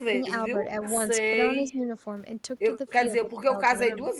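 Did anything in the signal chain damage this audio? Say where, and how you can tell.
Yes. Call processing dips the speech at 0.08–0.29 s, 1.61–1.99 s and 3.07–3.59 s, by up to roughly 15 dB, showing as notched envelope. This is likely speech suppressed in double talk, the echo canceller attenuating the talker along with the loudspeaker echo.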